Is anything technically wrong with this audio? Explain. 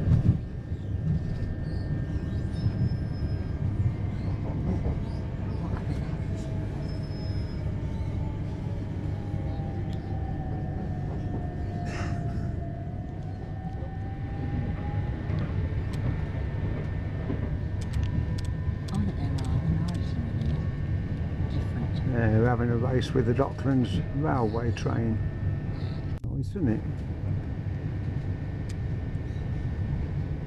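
No, nothing technically wrong turns up anywhere in this recording.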